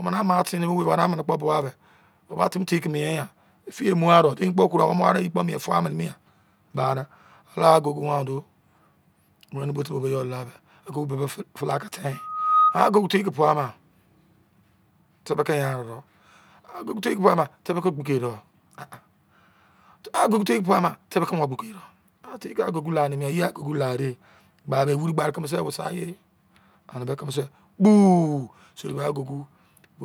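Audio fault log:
12.12–12.80 s, loudspeaker feedback squeal. A 1.2 kHz tone swells over about half a second, peaking about 5 dB above the speech. The microphone is re-amplifying its own loudspeaker.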